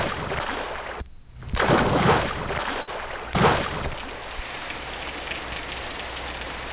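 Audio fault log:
2.82–2.89 s, short stall from a late packet: the jitter buffer ran dry, so the last sound was held 54 ms until the packet arrived, losing nothing. Spectrogram bands freeze flat below the call path's 4 kHz ceiling, and the waveform repeats with a slight buzz or dip.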